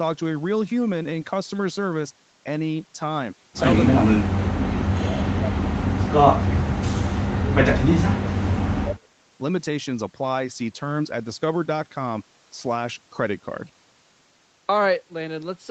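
From 6.91 to 9.11 s the speech sinks by as much as roughly 30 dB, fading and breaking up across about two seconds. The likely cause is speech suppressed in double talk: the far end spoke at the same moment, and the echo canceller, unable to separate this talker from its loudspeaker echo, turned everything down. Unlike a network dropout, there is no synthetic, smeared fill.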